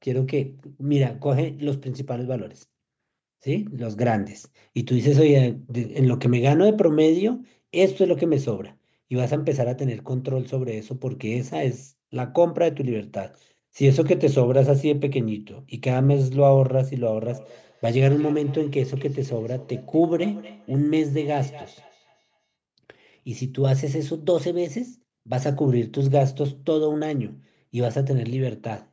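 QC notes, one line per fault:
17.22–22.52 s, feedback echo between two devices: the speech returns at a steady interval of roughly a fifth of a second, peaking about 22 dB below the direct sound. A second device in the room replays this microphone's signal, and this microphone picks it up again. Its echo canceller removes only its own device's playback.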